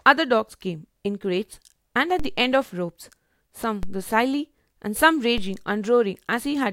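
Low thumps at 2.20, 3.83 and 5.38 s are DC steps: the waveform's zero line jumps by about -18, -18 and -20 dBFS, then drifts back as a 2 Hz high-pass drains it.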